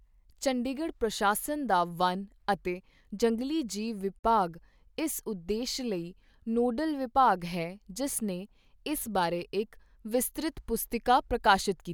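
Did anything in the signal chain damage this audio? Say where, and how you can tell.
Yes: a gap at a join of encoded pieces, 4.19 to 4.24 s. The speech drops out for 47 ms because encoder delay and final-frame padding were left in where segments met.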